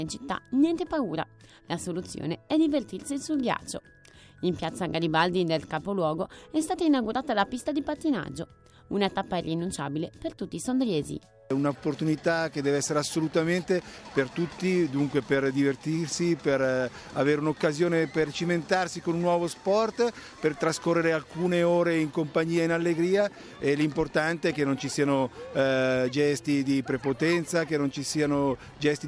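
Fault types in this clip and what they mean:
No technical faults can be heard anywhere in this audio, and the signal stays steady and intact throughout.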